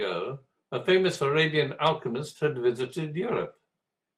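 Lost packets rebuilt from error correction occur at 1.13 to 1.15 s and 3.27 to 3.45 s. Each lost stretch was filled from a low-bitrate copy carried in the following packet, so nothing drops out, but the 20 ms and 100 ms rebuilt portions sound rougher and noisier.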